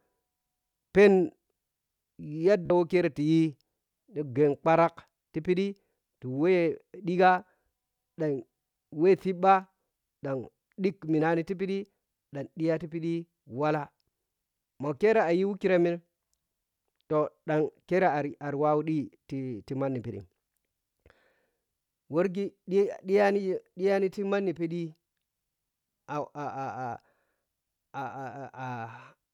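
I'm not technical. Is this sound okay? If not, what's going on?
No. At about 2.66 seconds there is a Bluetooth stutter, lasting around 44 milliseconds, just before "wo kere". Some wireless audio arrived too late, which fits a few lost packets. The player repeated its last bit of sound to fill the gap. Then the speech picks up later, skipping what was lost.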